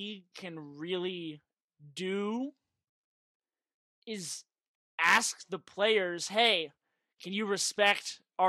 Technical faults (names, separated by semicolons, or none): none